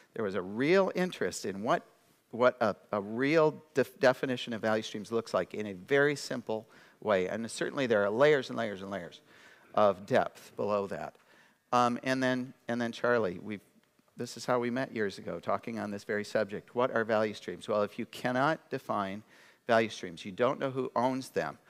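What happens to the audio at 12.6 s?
Nothing goes wrong at 12.6 s: the audio carries on intact, with no dropout, click, glitch or other fault at that point.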